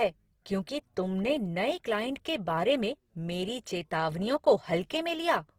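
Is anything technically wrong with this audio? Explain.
Yes. Throughout the speech there is audible Opus compression damage. The content still extends to about 20.3 kHz, but the tone is rough, grainy and noisy. The likely cause is Opus in music mode, which fits a low rate near 16 kbps, filling starved bands with folded or noise-like energy instead of leaving holes.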